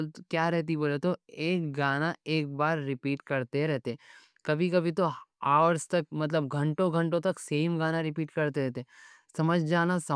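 Nothing here gives a listener cause for complaint: the speech comes through with no dropouts, clicks, glitches or other technical faults to point to at any moment.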